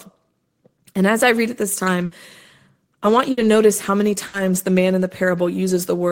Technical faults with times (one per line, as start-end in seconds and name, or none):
2.05-2.14 burst of packet loss
3.31-3.40 burst of packet loss
4.27-4.36 burst of packet loss